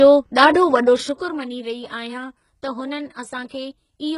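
HE-AAC compression runs throughout the speech: nothing survives above 11.1 kHz, and the treble is likely rebuilt by spectral band replication, copying lower bands upward so harmonics misalign. The heavy damage, gritty and lispy on s sounds, fits a bitrate near 12 kbps.

Zipper noise appears from 0.77 to 1.45 s, as the level falls by about 15 dB in unsmoothed 2 dB steps, around ten per second. Each abrupt step leaves a small click, so a ticking zipper rides on the speech during the fade.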